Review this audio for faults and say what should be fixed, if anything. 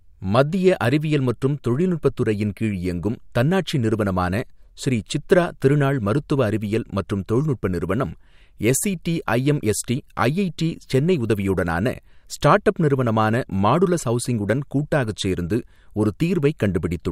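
Clock slip clicks run from 0.11 to 17.10 s as a soft rattle of single-sample ticks about every 30 ms. The likely cause is two free-running clocks roughly 700 ppm apart. Their steady spacing and the absence of gaps distinguish them from dropouts. Prevent this by locking both devices to one shared clock or by resampling between them.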